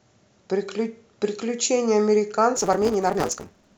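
From 2.56 s to the end at 3.78 s, a block size mismatch (truncated) sets in. Each block's tail is discarded, fitting 256-sample reads, so the speech runs about 1.88 times faster at near-normal pitch under a 172 Hz buzz. A spectrogram shows regular vertical striations about 5.8 ms apart, and the waveform shows matching step discontinuities.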